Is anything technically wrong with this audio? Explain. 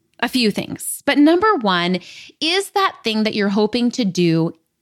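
No technical faults are audible.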